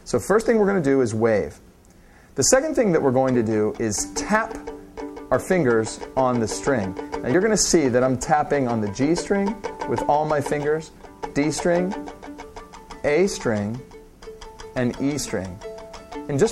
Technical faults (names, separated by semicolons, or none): dropped buffer (overrun)